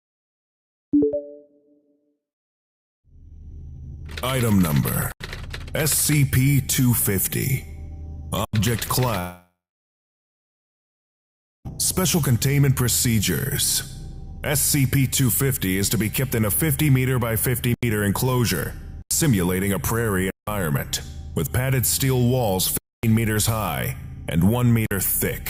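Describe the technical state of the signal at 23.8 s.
At 23.8 s the signal is intact, with no audible fault at that moment.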